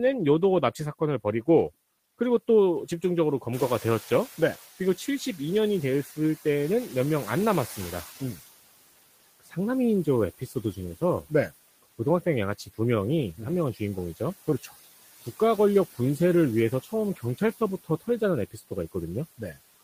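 Speech recorded over background room noise carries noise suppressor artifacts from start to finish. The suppressor pulls the steady noise down by about 15 dB, so the residue sinks in the gaps and swells under the voice. On a spectrogram this shows as a mottled, flickering noise floor. At roughly 3.5 s the room noise jumps by about 13 dB, and the noise suppressor catching up runs from 3.53 to 8.14 s. Its noise estimate lags, so the louder noise passes with less reduction at first and then fades over about 4.6 s as the estimate adapts, reaching a cut of about 11 dB. This appears as a bright band of noise that dims gradually across those seconds. Speech is also cut by the noise suppressor at 9.40–9.56, 10.39–10.56, 17.16–17.60 and 18.51–18.72 s, with drops of about 16, 12, 12 and 16 dB respectively. In each case roughly a tenth of a second of speech was mistaken for noise, so those moments sound swallowed, and the waveform and spectrogram show brief notches carved out of the voice's energy.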